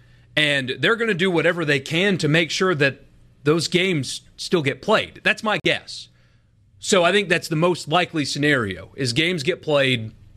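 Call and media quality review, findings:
Corrupt frame muted, speech, 5.60 to 5.66 s. Abrupt hard-edged silence, 58 ms, length fitting two consecutive codec frames. Decoder rejected bit-damaged frames; player inserted silence. Distinct from packet loss concealment: no smeared or repeated sound filling the gap, just a clean hole. Timing preserved, with no shift or skip after the gap.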